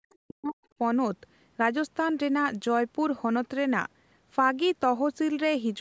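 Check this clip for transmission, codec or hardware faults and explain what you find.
One fault stands out, in the opening stretch of the speech. From 0.00 to 0.79 s, the speech is suppressed in double talk. The level dips, at its deepest by about 40 dB, and the pieces taken out add up to roughly half a second. The likely cause is an echo canceller that heard far-end audio at the same time, could not separate the near talker from loudspeaker echo, and turned everything down. Packet loss would instead leave abrupt gaps or smeared, repeated fragments. Here the speech is ducked in level. The call's microphone processing limits the band to 8 kHz throughout, as expected.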